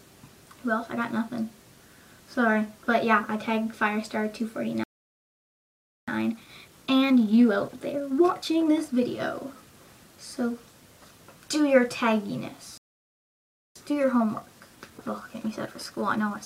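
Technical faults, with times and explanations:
4.84–6.08 s, playback stall: the sound cuts out mid-flow for 1.24 s, likely because the player ran dry of buffered data or its thread was blocked.
6.08–9.08 s, time-compressed catch-up: the sound runs 1.1 times fast at normal pitch as small slices are cut and cross-faded to shrink the backlog.
12.78–13.76 s, playback stall: a second silent gap of 0.98 s interrupts the sound, likely from the player again starving for data or being blocked.
13.76 s to the end, time-compressed catch-up: the sound is hurried at 1.1 times speed without a pitch change, as small segments are spliced out and cross-faded.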